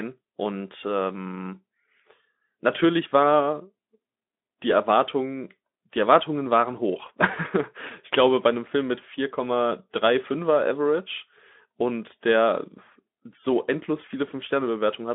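No technical faults can be heard in the speech, which comes through a Speex speech codec on a narrow line of roughly 200 Hz to 3.5 kHz, with nothing present above about 3.8 kHz.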